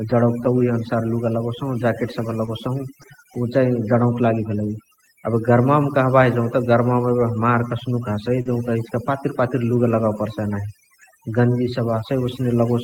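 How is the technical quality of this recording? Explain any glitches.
The technical quality is weak. Heavy-handed noise processing runs through the whole recording, and there are two brief network glitches in the speech, one near 2.45 s and another near 8.41 s.

The overdone noise removal is constant. The suppressor was pushed so hard that it pulls individual frequency bands down or out whenever they sit near its idea of the noise floor, and it takes the quieter parts of the voice along with them. So the gaps between phrases drop away and break up into little twinkling specks.

The first short concealed packet loss runs from 2.45 to 2.49 s, with 20 ms that never arrived. The second follows "कस्नुक हसइ" and runs from 8.41 to 8.47 s, with 40 ms missing. Each time the receiver papered over the hole by carrying the last bit of sound forward, extending the pitch if it was voiced or filling with shaped noise if not, and then crossfading back into the real signal. 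You hear it as a quick smear or wobble rather than a dropout.

The lost packet rebuilt from error correction overlaps both concealments. The first covers 2.47 to 2.49 s, with 20 ms rebuilt. The second runs from 8.45 to 8.51 s, right before "इचिका पातिर पातिर", with 40 ms rebuilt, which fits two lost packets. In each case the following packet carried a low-bitrate Opus in-band copy of the missing audio, and the decoder played that copy, so there's no gap. Those stretches sound a bit rougher and noisier than the material around them.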